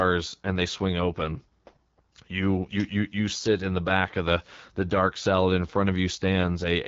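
From start to finish the speech passes through the AMR wideband (HD Voice) codec, and the damage is plainly audible. Nothing reaches above 7.3 kHz, and the voice sounds rough and raspy, which fits one of the lowest AMR-WB rates, around 8.85 kbit/s. The coder rebuilds the voice from a pulse-excited vocal tract model with too few bits. Unlike narrowband telephone coding, the sibilants still extend to about 7 kHz, though that top band is filled with shaped noise.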